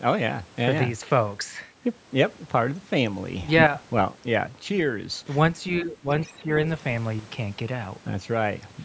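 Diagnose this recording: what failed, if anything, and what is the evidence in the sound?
From 3.48 to 3.67 s the speech and the background noise jump up together by about 9 dB, then drop back. This is a sudden gain jump, likely in the digital gain stage of the driver or processing chain, where a new gain was applied instantly with no ramp.

The speech dips twice: from 5.81 to 6.07 s by roughly 10 dB at its deepest, and from 6.29 to 6.48 s by around 5 dB. This is speech suppressed in double talk. In the call processing stage, the echo canceller likely mistook the overlap for echo and attenuated everything.

Between those dips, from 6.22 to 6.26 s, a brief faint scrap of a second voice sits roughly 25 dB under the speech. This is the other side's voice leaking through, likely loudspeaker echo that the call processing's echo canceller failed to fully subtract from the microphone signal.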